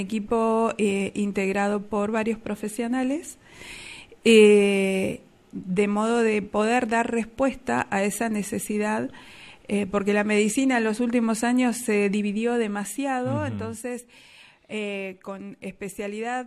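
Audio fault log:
No fault in this audio.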